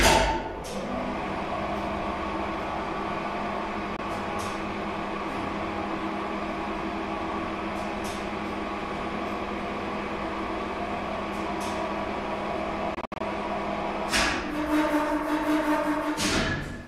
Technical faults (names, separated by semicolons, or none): Bluetooth dropout